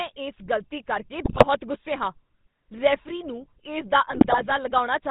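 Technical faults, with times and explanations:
Throughout, GSM full-rate codec: the audio has the buzzy, gravelly roughness of this early coder, which fits a 13 kbps full-rate link. It rebuilds the sound from a vocal-tract filter driven by regularly spaced pulses, keeping only a third of the excitation samples. The coarse pulse train gives the grainy buzz, and nothing above 4 kHz passes, so the top end sounds dull and boxed in.
1.24–1.47 s and 4.10–4.54 s, GSM bit errors: the speech breaks into squawks, pops and gargling. The first burst comes just after "ਗ਼ਲਤੀ ਕਰਕੇ" and ends at "ਗੁੱਸੇ ਹਾਂ", and the second follows "ਰੈਫਰੀ ਨੂੰ ਇਸ ਦਾ". Corrupted filter, pitch and gain values reach the decoder, bending the spectrum or spiking the level for each damaged frame. The first burst is denser, at about 6% bit errors against about 2%, but the second lasts twice as long.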